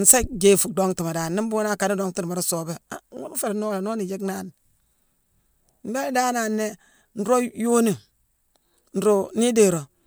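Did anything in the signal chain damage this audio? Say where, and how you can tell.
No, no damage found.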